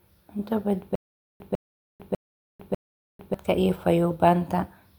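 Speech clip with a stutter with silent gaps from 0.95 to 3.34 s: a 150 ms fragment repeats four times, separated by about 447 ms of dead silence, likely a stalling stream.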